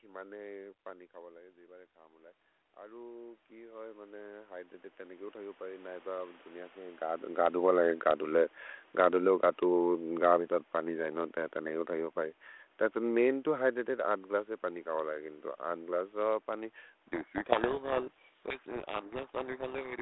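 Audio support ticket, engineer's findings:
Automatic gain rising, 0.83 to 6.5 s: level drop of about 17 dB as the talker moves back near 0.5 s. AGC lifts gain about 18 dB over several seconds, so voice and room noise swell together.

Automatic gain falling, 7.47 to 12.02 s, ending just before "हो परि तत्स मैन्": talker moves near 7 s. Input too loud or its noise too strong for the gain, AGC pulls gain down about 5 dB gradually. Voice and background sink together.

Codec payload misread, 17.08 s to end, starting after "ग्लस्से पनि": G.726 decoder reading code words with the bit order reversed. Valid-looking but wrong difference values bury the speech in harsh distortion through the end of the clip.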